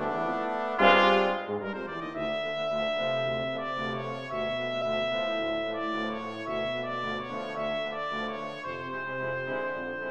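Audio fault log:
4.79–4.82 s, compressed frames skipped: the audio jumps forward by about 20 ms of material, which points to lost or rejected frames.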